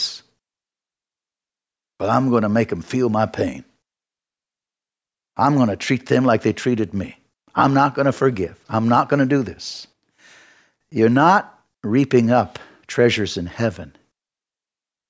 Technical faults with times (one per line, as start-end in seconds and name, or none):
none